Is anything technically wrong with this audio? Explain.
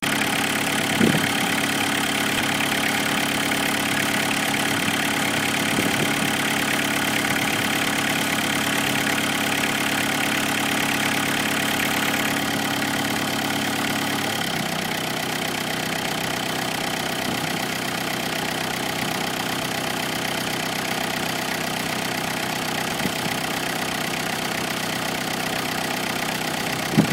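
Yes. Twice the audio briefly jumbles: at 2.38 to 2.42 s, and again at 22.92 to 23.0 s, where the jumble lasts longer. These are chunks out of order. The audio is in 20 ms pieces, and at each point one piece arrived late and played after pieces that should follow it, one chunk late first, then three. Nothing is lost, but the order is scrambled, with hard joins.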